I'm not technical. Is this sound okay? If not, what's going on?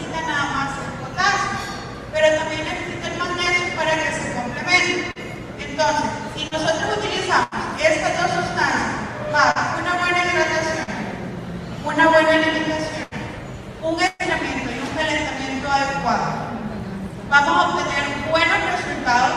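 No. Short concealed packet loss at 5.11, 6.47, 9.51 and 10.83 s: each time about 40 ms never arrived, and the player stretched the previous sound to cover it, causing a brief smear. A burst of packet loss at 7.43, 13.03 and 14.07 s: 80 to 120 ms went missing, heard as a fading buzz or hiss before the sound jumps ahead.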